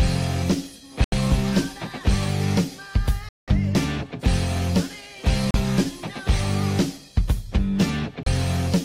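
Four times the sound just drops out to dead silence and then carries on: at 1.04 s for 80 ms, at 3.29 s for 190 ms, at 5.51 s for 35 ms, and at 8.23 s for 31 ms. That's the classic Bluetooth stall pattern, likely radio interference holding packets up long enough that the headphones' buffer ran empty, so playback froze until the resent data caught up.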